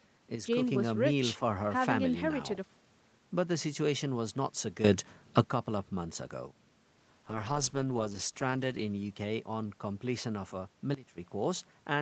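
A gain change was likely applied without a ramp, causing a sudden gain jump from 0.35 to 0.62 s. Sound and background noise drop together by about 6 dB. A second sudden gain jump from 4.84 to 5.44 s, likely the same unramped step, lifts everything by about 12 dB at once. From 7.27 to 9.91 s, a call bitrate drop forces the Opus encoder to code far more coarsely, which fits a fall from 32 to 9 kbps. The bitrate stays at its lowest for about a second, and the speech turns rough and watery. From 10.94 to 11.18 s, another sudden gain jump, likely an abrupt digital gain step, cuts the level by about 16 dB.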